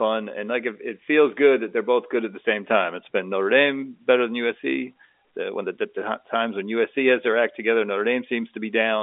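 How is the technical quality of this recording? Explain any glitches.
The technical quality holds up, with no glitches to explain.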